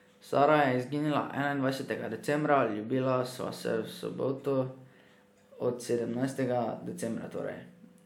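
No technical faults are audible.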